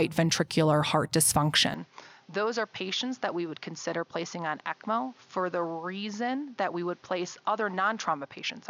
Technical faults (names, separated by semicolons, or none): input switched to a poorer device